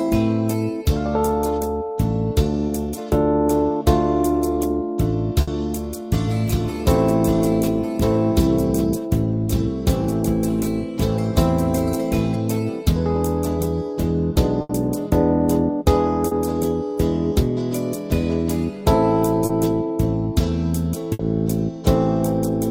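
At 2.67 s, short concealed packet loss fills 20 ms of missing audio by extending the preceding sound, leaving a brief smear before blending back. Similar smears recur at 16.27 s and 19.45 s, each 40 ms.

At 5.41 s, a burst of packet loss drops 60 ms. The last sound is held and faded, then playback resumes further on with that stretch gone. Similar gaps follow at 14.61 s (80 ms) and 21.13 s (60 ms).

From 6.28 s to 12.36 s, a doubled audio track appears abruptly. A dry, full-band copy about 5 dB quieter trails roughly one second behind, likely from a second capture path.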